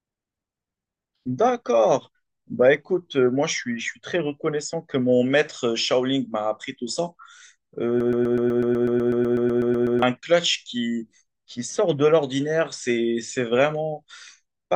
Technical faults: broken-record loop

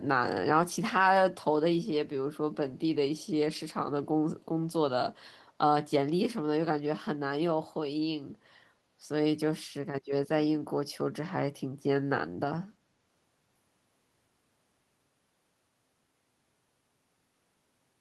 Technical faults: echo leak

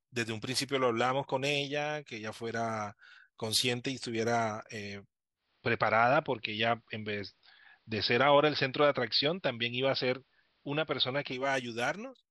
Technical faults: digital radio blending to analogue

